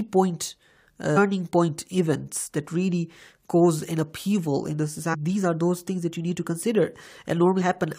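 At 1.16 s, 5.13 to 5.15 s and 7.60 to 7.62 s the speech breaks up briefly, each from damaged data in a compressed stream. Corrupted bytes make the decoder misread frames and lose sync until it finds the next valid frame header.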